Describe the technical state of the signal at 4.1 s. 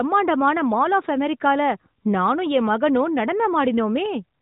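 At 4.1 s the signal is intact, with no fault present, only the narrowband mobile-codec character that leaves nothing above about 3.8 kHz.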